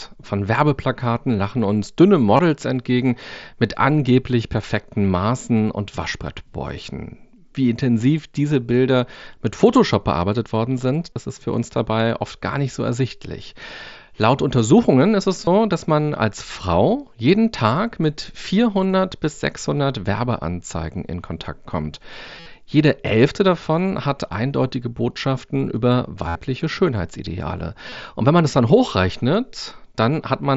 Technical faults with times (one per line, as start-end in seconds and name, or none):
2.37-2.39 concealed Bluetooth headset packet loss
11.13-11.16 concealed Bluetooth headset packet loss
15.45-15.47 concealed Bluetooth headset packet loss
22.40-22.46 concealed Bluetooth headset packet loss
26.28-26.35 concealed Bluetooth headset packet loss
27.90-27.92 concealed Bluetooth headset packet loss